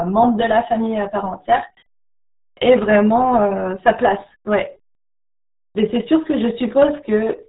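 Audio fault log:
throughout, RealAudio 14.4 codec: the speech sounds muffled and gargly, with heavy artefacts that fit a dial-up-era rate near 8 kbit/s. A spectrogram shows a hard ceiling at 3.8 kHz with nothing above it, and the bands below are smeared and blotchy.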